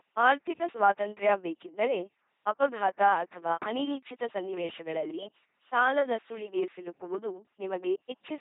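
A speech recording, processed throughout by an LPC-10 vocoder, with heavy damage. The voice sounds buzzy and mechanical, like a robot. That is how this coder works. It reduces each short frame to a simple filter shaping the vocal tract. The filter is driven either by a pulse train or by noise, never a mix. Natural breath and texture are lost. Nothing remains above 3.8 kHz. The sound fits a 2.4 kbit/s LPC-10 coder.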